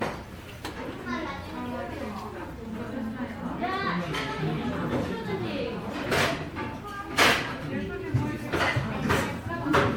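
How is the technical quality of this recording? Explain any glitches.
The recording is degraded throughout by generation loss. It sounds swirly, smeared and hollow for its whole length, with blurred attacks and nothing above about 19.9 kHz. This most likely comes from MP3 encoding repeated about seven times, at rates that fit roughly 93 kbit/s. Each new pass requantises on a shifted frame grid, so noise and spectral gaps compound. What separates this from a single low-bitrate encode is that the hollowness and swirl go beyond what that bitrate alone would leave.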